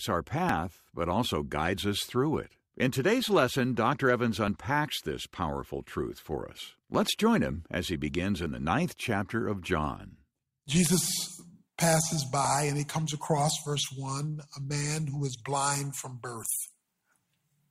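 Brief skips land at 0.49, 4.48, 8.46, 12.45 and 16.43 s, spaced 4 s apart. This is overlap between stream segments. Neighbouring segments claim the same few milliseconds, so the player discards real audio. The waveform jumps, and each join gives a tiny skip.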